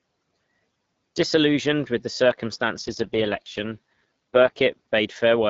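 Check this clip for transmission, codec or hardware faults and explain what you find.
One fault, in speech carried over AMR wideband (HD Voice) with light coding roughness. AMR rate drop from 2.81 to 4.52 s: the link forced the codec to a lower mode, shifting bits to error protection. The speech turns raspy and synthetic with no gap or band loss, which fits a step from 12.65 to 6.6 kbit/s.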